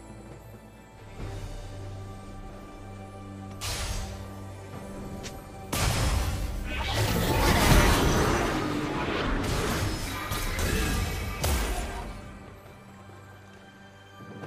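Nothing in the audio stood out as a technical problem on listening.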